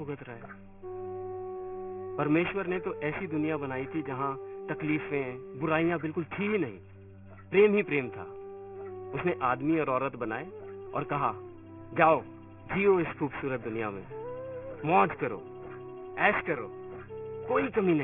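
Aliasing runs through the whole clip. The audio was downsampled without a proper anti-alias filter, which fits a drop to about 6 kHz, so content above 3 kHz folds back as stray, unrelated tones. Highs sound gritty and metallic, and the band stops hard at 3 kHz.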